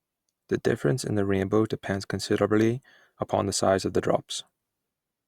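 No technical faults are audible anywhere in the recording.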